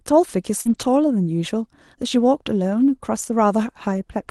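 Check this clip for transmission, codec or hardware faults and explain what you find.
Two transmission faults are audible in the speech, both from packets lost on a call link. The audio passes through an Opus call path whose content stops around 12 kHz.

Short concealed packet loss, 0.61 to 0.67 s: a brief smear lasting about 40 ms, where the sound seems to hang on and wobble before rejoining. That stretch never reached the decoder in time. The receiver patched the hole by extending what it had just played, continuing pitch for voiced sound and shaped noise otherwise, then crossfaded back into the real signal.

Lost packet rebuilt from error correction, 0.65 to 0.83 s and again at 3.25 s: a rougher, grainier, noisier texture with no gap. The first stretch holds about 100 ms of rebuilt audio, five 20 ms frames. The second lasts about 20 ms, a single frame. Each lost packet was replaced by a low-bitrate backup copy carried inside the following packet, which is Opus in-band forward error correction. 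Those coarser copies keep the sound continuous but audibly degraded.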